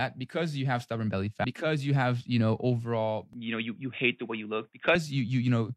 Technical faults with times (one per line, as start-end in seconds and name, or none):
1.40-1.44 compressed frames skipped
3.33-4.95 input switched to a poorer device